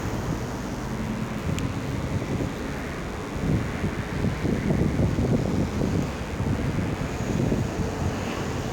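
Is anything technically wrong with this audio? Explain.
Yes. A DECT cordless phone buzz runs through the whole clip. A DECT handset or base station nearby sends a short radio burst every 10 ms. The audio circuit rectifies those bursts, turning them into an audible signal. The result is a steady, thin buzz at 100 Hz with many harmonics stacked above it. The buzz sits well under the main sound, roughly 25 dB down. It never stops or changes.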